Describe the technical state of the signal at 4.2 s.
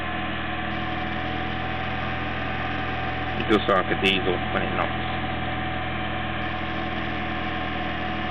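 At 4.2 s the audio is intact, with no fault audible at that moment.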